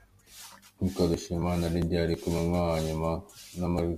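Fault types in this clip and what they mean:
Crude rate conversion: The speech was resampled by picking the nearest existing sample, with no filter, so samples are periodically dropped throughout, a pattern that fits a 48 kHz to 44.1 kHz change. The timing errors add a gritty, inharmonic fizz, roughly 30 dB below the speech, that rises on loud and bright sounds such as sibilants. Unlike steady quantisation hiss, it follows the signal, and unlike plain aliasing it adds a repeating jitter-like roughness.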